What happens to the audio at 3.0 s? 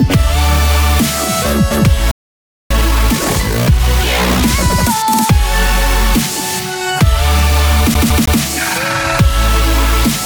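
A time-compressed catch-up runs from 2.71 to 3.89 s: small segments are dropped and cross-faded, so the audio plays about 1.5 times faster at unchanged pitch.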